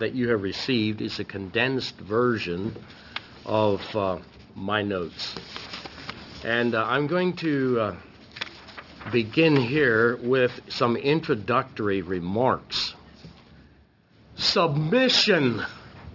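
Aliasing runs throughout: content above 6 kHz folds back as gritty, metallic tones, consistent with downsampling to 12 kHz unfiltered, and the spectrogram shows mirrored energy packed hard against 6 kHz.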